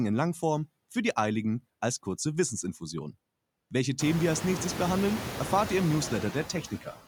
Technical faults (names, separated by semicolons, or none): noise suppressor artifacts; speech cut by the noise suppressor